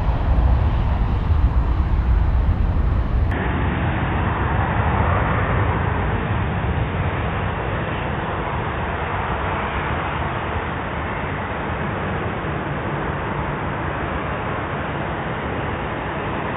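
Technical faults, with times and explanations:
3.31 s to 16.57 s, likely an input switched to a poorer device: the sound abruptly goes dull and boxy with nothing above 3.7 kHz, with no gap and no real level jump at the change, plus a faint new noise floor well below the signal, right through to the end.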